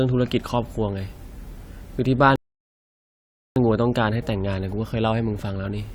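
A speech recording with a rebuffering stall: at 2.36 s the sound drops to silence and stays there until 3.56 s, then picks up exactly where it stopped. The player ran out of downloaded audio and waited for more, adding 1.2 s of dead air. Unlike a dropout or packet loss, nothing is skipped: the speech on either side joins seamlessly, so only time is inserted.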